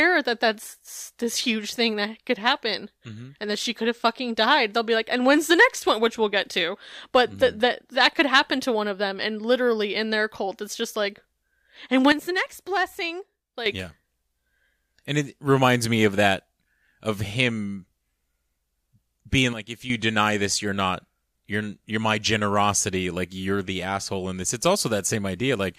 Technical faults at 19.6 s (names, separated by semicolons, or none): sudden gain jump